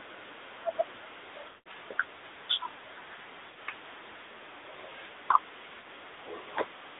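The whole clip goes through the AMR narrowband mobile codec, squeezed into roughly 300 Hz to 3.7 kHz. There's plainly audible buzzy, synthetic colouring that fits a mid-rate mode around 10 kbps. Then come lost AMR speech frames. At 1.42 to 1.68 s about 200 ms drop out across 240 ms, with a 180 ms run where the decoder stretches the last sound and it fades away. Shorter warbly dips follow at 3.50 to 3.58 s (60 ms) and 5.80 to 5.87 s (40 ms).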